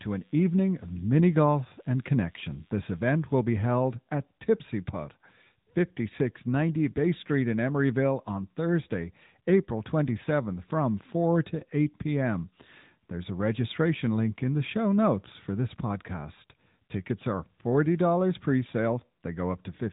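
From start to finish the speech carries the sound of the AMR narrowband mobile codec. Nothing above 4 kHz survives, so sibilants and consonant detail are dulled, and the voice has the plainly audible buzzy, synthetic edge of a vocal-tract model excited by sparse pulses. That degree of coding damage fits a mid-rate AMR-NB mode of around 10 kbps, where the codec rebuilds speech from a handful of parameters rather than preserving the waveform.

Between 11.60 and 11.65 s there is a lost AMR speech frame, heard as a brief dip or warble in the speech. A frame failed its error check, so the decoder filled the gap by reusing the previous frame's pitch and vocal-tract settings at reduced gain. The gap fits a single 20 ms frame, too short to stretch into a fade, and the speech then resumes with momentary roughness.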